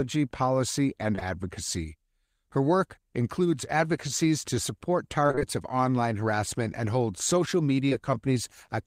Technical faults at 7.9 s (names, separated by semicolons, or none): short concealed packet loss